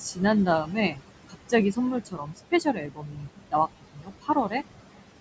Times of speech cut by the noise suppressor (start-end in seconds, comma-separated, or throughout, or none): 0.46-1.53, 2.00-4.54